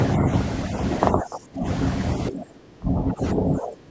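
Speech suppressed in double talk hits this speech clip from 1.12 to 1.66 s and again from 2.29 s to the end at 3.91 s. The voice sinks by as much as about 25 dB, most likely because an echo canceller, faced with both sides talking at once, couldn't separate them and ducked everything.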